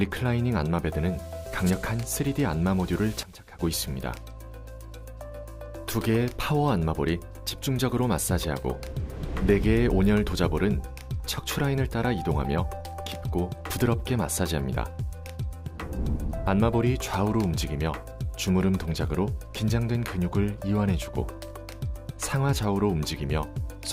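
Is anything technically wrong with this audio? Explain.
Yes. From 3.23 to 3.59 s there is a sudden gain jump: the sound and its background noise drop together by about 16 dB, likely from a digital gain change applied with no ramp. On a waveform the envelope steps down abruptly, and a spectrogram dims across all frequencies at once.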